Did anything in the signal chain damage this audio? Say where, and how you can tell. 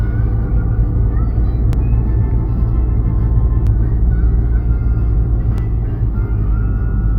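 Yes. There are two kinds of damage, at two different stages.

At 1.73–1.75 s, 3.67–3.69 s and 5.58–5.60 s, a brief stutter-click is heard where a sliver of sound plays twice. These are overlapping chunks from the buffering or block-processing stage. The audio was handled in 2.0 s blocks, and each block began about 21.33 ms before the previous one ended. That short span repeats at every join, which is why the stutters come at a steady two-second spacing.

At 2.47 s and 3.90 s, the sound jumps forward. This is compressed frames skipped, at the codec or storage stage. Whole frames of about 21.3 ms were never played back. The jumps sound like roughly a tenth of a second lost at the first point and around 40 ms at the second, which points to about four frames and two frames dropped.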